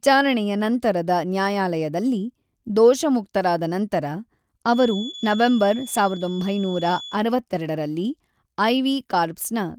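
From 4.66 s to 7.23 s a thin, steady feedback whistle sits at 3.4 kHz, about 15 dB below the speech, swelling and fading slowly in level. It likely comes from the loudspeaker-to-microphone loop resting right at the edge of feedback, sustaining one frequency without running away. On a spectrogram it shows as a narrow horizontal line across that span. The waveform barely shows it, except as a faint filled-in floor in the pauses.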